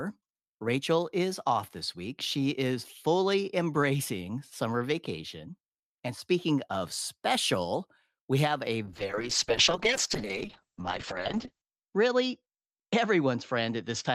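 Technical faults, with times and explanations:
8.87–14.14 s, call bitrate drop: Right after "special we have a", the speech turns coarse and watery, and its top end collapses from a full 20 kHz band to about 8 kHz, so it sounds muffled through to the end. The call's bandwidth estimate fell, and the encoder was starved of bits, which fits a fall from around 40 kbps to about 7 kbps. It holds at that lowest rate for about 2.75 s.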